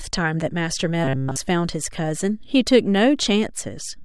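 Robotic sound from repeated short buffers, 1.04 to 1.37 s: the speech becomes a rigid metallic buzz near 133 Hz, likely from a roughly 7.5 ms buffer looping throughout.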